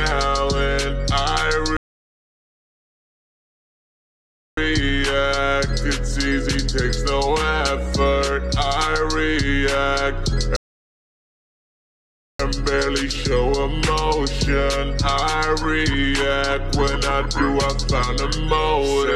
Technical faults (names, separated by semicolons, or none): rebuffering stall